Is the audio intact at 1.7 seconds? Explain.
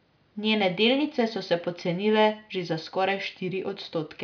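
Yes, the speech at 1.7 s plays through intact, with no dropout, click, distortion or other fault audible at that moment.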